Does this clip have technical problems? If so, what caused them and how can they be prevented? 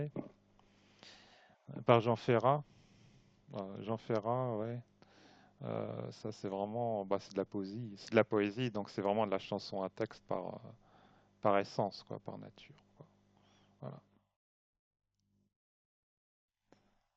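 No, no technical faults are audible.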